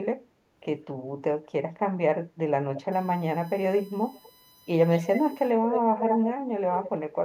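Speech, with two faults. Delayed copies of the voice come back as echo leak at 2.76, 4.13, 4.90, 5.70, 5.98 and 6.82 s, each lagging the original by about 200 ms and lasting from a brief scrap to roughly half a second. They range from faint to about as loud as the speech itself around 5.7 to 6.3 s. The likely cause is a far-end loudspeaker whose echo canceller let its microphone pickup through. On a spectrogram each echo looks like a duplicate of the preceding syllable pattern, shifted right by about 0.2 s. From 2.92 to 5.51 s a USB whine sits under the sound, a steady tone on a 1 kHz series with its strongest component at 4 kHz, about 30 dB below the signal. This is current drawn in the bus's 1 ms frames leaking through power or ground. It appears as flat horizontal lines at 1 kHz and its multiples, brightest at 4 kHz.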